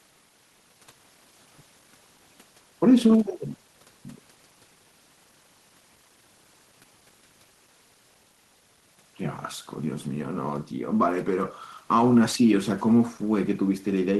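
Nothing stood out as a technical fault when listening to this speech recording.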